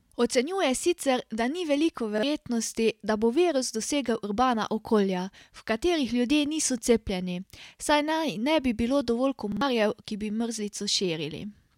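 Repeated buffer at 2.18 s and 9.52 s: playback ran out of fresh speech and replayed the last 46 ms piece, fitting a 2048-sample buffer. It is a hard-edged stutter, doubled at 2.18 s and tripled at 9.52 s, losing about 50 ms and 100 ms.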